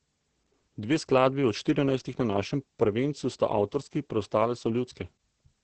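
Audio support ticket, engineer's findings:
Opus voice compression, SILK mode, whole clip: wideband cut, nothing above 8.5 kHz; coarse excitation coding, consistent with about 10 kbps. Speech muffled, hoarse, slightly robotic.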